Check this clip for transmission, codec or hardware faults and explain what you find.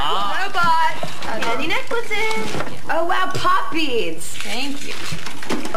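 One fault runs through the whole clip: a DC offset. The waveform sits displaced from zero by a constant level of about -12 dBFS, the kind of shift a converter or input stage with a bias error leaves behind. It cannot be heard as a tone, but it eats headroom on one side and puts steady energy at 0 Hz. Unlike hum or rumble, it neither pulses at 50 or 60 Hz nor wanders.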